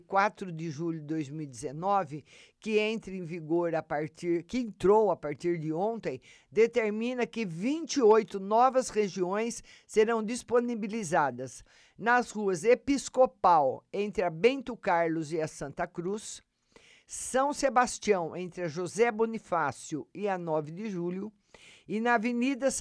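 Speech recording; no technical faults detected anywhere in the clip.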